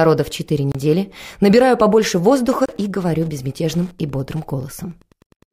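Throughout, Wi-Fi interference: a nearby radio's beacon, rectified by the audio circuit, gives faint ticking every 102.4 ms, well below the signal. At 0.72 s and 2.66 s, 29 ms silences, each likely a Bluetooth dropout consistent with two lost packets, after which the sound resumes as if it had played on.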